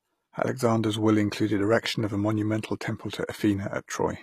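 Speech runs through the whole clip with plainly audible codec damage: s sounds come out gritty and metallic, and nothing survives above about 14.9 kHz. That's likely HE-AAC compression, with the treble rebuilt by band replication that fits a bitrate around 24 kbps.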